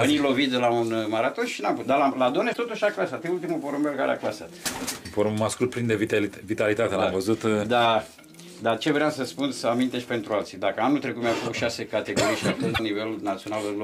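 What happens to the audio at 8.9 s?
Nothing goes wrong at 8.9 s; the audio plays through that moment intact, with no dropout, click, glitch or other fault.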